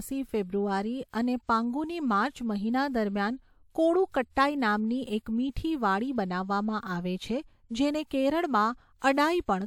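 A short hiss arrives just ahead of three sharp onsets in the speech, and each attack sounds softened and smeared: at 1.11 to 1.14 s (about 26 ms), at 4.12 s, and at 8.06 to 8.11 s (about 48 ms). This is pre-echo. The transform codec spread quantisation noise across each whole block, so noise scaled for the loud attack leaked into the quiet instant before it.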